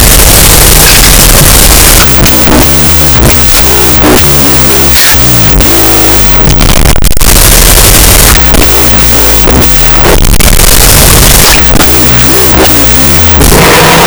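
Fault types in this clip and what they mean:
Wrong sample width: Sound stored as 16-bit integers is read as unsigned 8-bit values. Each sample becomes two separate bytes, and only the high bytes still follow the signal. Loud noise buries the speech, which runs at half speed and an octave low throughout.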